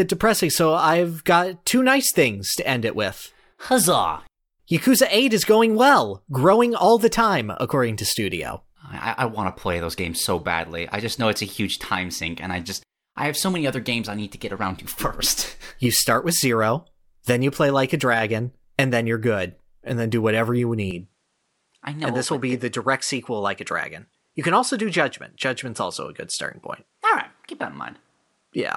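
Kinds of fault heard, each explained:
Input switched to a poorer device: the recording path most likely changed over mid-recording to a different, lower-grade microphone, one that passes a narrower band. From 20.91 s, right after "then do whatever you", to the end, the speech loses its top end, with nothing above 11.4 kHz, so it sounds duller. The switch comes with no silence and little change in level, but brings a new background noise floor about 50 dB below the speech.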